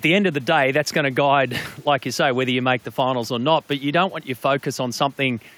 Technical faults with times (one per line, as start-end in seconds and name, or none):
none